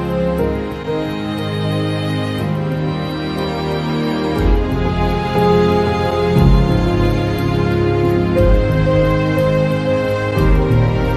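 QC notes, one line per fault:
No faults found.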